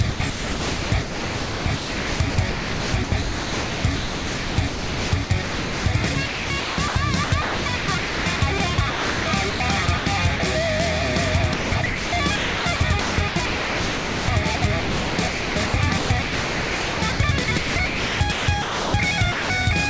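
From 0.10 to 5.86 s, 6.14 to 6.96 s, 7.24 to 9.60 s, 9.86 to 10.06 s, 11.54 to 14.28 s and 14.56 to 18.94 s, the audio is chopped, most likely by the sender's voice detector. It repeatedly cuts in and out, with parts of the sound replaced by comfort noise. Unlike a single dropout, the chopping switches back and forth within each stretch.

At 10.36 to 10.40 s and 19.32 to 19.50 s, the voice detector likely drops the sound. The sound gives way to steady comfort noise in one unbroken block of 40 ms and 180 ms respectively, then returns.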